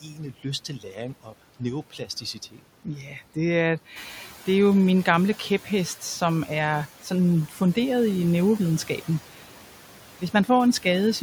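A noise suppressor runs over the whole clip, pulling down every band it judges to be steady noise by about 12 dB, frame by frame. Because that gain changes constantly, the residual room noise, sitting about 21 dB under the speech, sinks in the pauses and rises back up beneath the voice. These noise suppressor artifacts are present from start to finish.

Within that, the suppressor repeatedly mistakes parts of the speech for noise, so speech is cut by the noise suppressor at 0.01 to 0.19 s, 0.68 to 0.96 s, 1.93 to 2.6 s and 7.49 to 7.76 s. Each time it turns speech down along with the background, by about 8 to 10 dB at the deepest point. Only around a tenth to a sixth of a second of sound is affected in each stretch, so soft consonants and word endings come across swallowed or faint rather than fully missing.

Around 4.0 s the room noise jumps by about 16 dB, ending up about 18 dB below the speech. 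The suppressor's noise estimate lags behind this rise, so from 3.96 to 4.26 s the noise suppressor is catching up. For roughly 300 ms the louder background comes through with only about 7 dB of reduction, then drops away as the estimate adapts.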